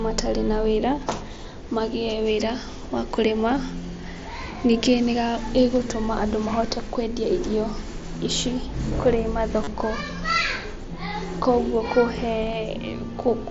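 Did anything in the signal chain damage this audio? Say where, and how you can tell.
Yes. The damage is at the wireless link: concealed Bluetooth headset packet loss from 9.63 to 9.68 s, just after "ici kũrĩ". A run of roughly 38 ms of audio never arrived, which fits a few consecutive lost headset frames. The receiver filled the gap by repeating the best-matching recent waveform segment, so you hear a brief buzzy tone held at full level, then a slight warble as real speech resumes. On a waveform, the gap shows as near-identical repeated cycles with no drop in amplitude. On a spectrogram, it shows as flat horizontal harmonic stripes where the speech formants should move. The mSBC wideband coding around it, with its 8 kHz ceiling, is working as expected.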